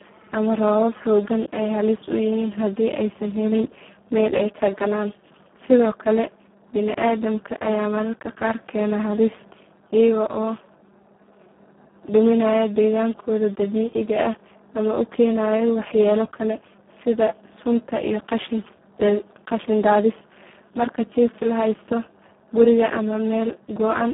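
From start to finish, heavy Speex codec damage leaves the speech hoarse and noisy, which fits a very low setting near 4 kbps, with the band limited to 150 Hz to 3.4 kHz.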